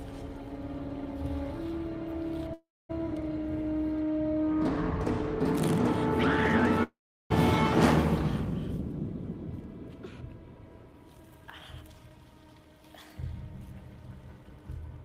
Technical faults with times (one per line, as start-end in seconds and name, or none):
2.53-2.91 long network dropout
6.83-7.32 long network dropout